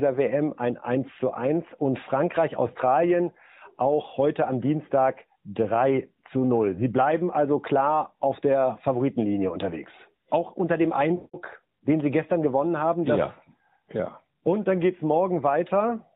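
Right after "unter dem", from about 11.16 to 11.36 s, you get lost AMR speech frames: a run of roughly 180 ms, which fits nine 20 ms frames dropped over the radio link. The decoder keeps replaying the last good pitch and vocal tract settings while ramping the gain down, so the sound smears into a drawn-out tail that fades to near silence before the talker returns, a bit weak or rough at first, over the light AMR narrowband band limit.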